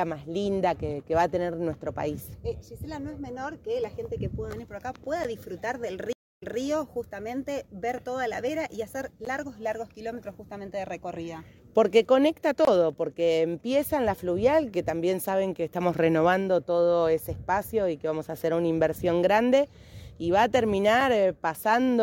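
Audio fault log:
5.24 s, 9.25 s, 12.65–12.67 s and 21.01 s, block of digital silence: the output drops straight to zero and back with no fade. Lengths are about 12 ms, 14 ms, 23 ms and 3 ms. The first and third fit a 512-sample and a 1024-sample buffer, so the output buffer likely wasn't filled in time.
6.13–6.60 s, stream reconnect: the connection dropped, leaving about 289 ms of silence. A fresh decoder then picked up mid-stream, and the audio comes back 183 ms earlier than where it cut off, so you hear a short stretch repeat.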